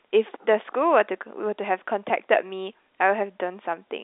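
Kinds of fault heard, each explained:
No faults are heard in this speech. It comes through a G.711 telephone path that is working as intended, so the sound is held to the line band of 250 Hz to 3.7 kHz with nothing above 4 kHz, which fits A-law coding at 64 kbps.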